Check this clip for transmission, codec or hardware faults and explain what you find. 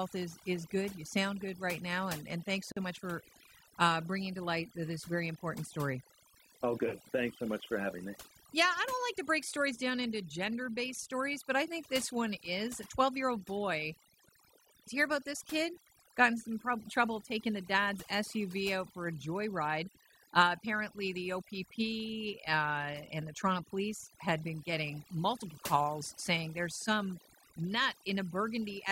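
Two faults are present. One runs through the whole clip and one is a brief dropout.

Overdone noise removal affects the entire recording. The noise reduction is set too strong. Frequency bands near its noise estimate get pushed far down or cut, taking quiet parts of the voice too. The background drops and breaks up into twinkling specks.

A gap at a join of encoded pieces occurs from 2.72 to 2.77 s, lasting about 47 ms. It falls between "now and and thanks" and "much for uh bringing". Separately encoded segments were joined untrimmed, keeping start delay and end padding. The silence has smeared edges, then the speech resumes where it stopped.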